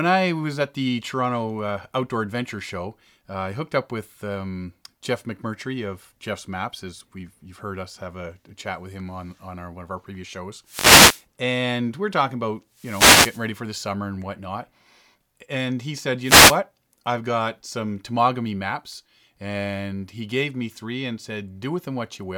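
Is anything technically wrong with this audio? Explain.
Yes. Wireless microphone noise hits occur at 10.65–11.25 s (after "of our previous shows"), 12.74–13.50 s (after "and we're talking about") and 16.21–16.60 s (after "and he said"). Multipath cancellation fades the FM carrier, so receiver noise rises as a brief static swish over the speech.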